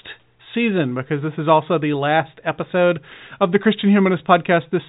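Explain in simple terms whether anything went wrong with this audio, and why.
Nothing went wrong: the speech has the narrow telephone sound of G.711 telephone coding, with nothing above 3.8 kHz, which is how that format is meant to sound.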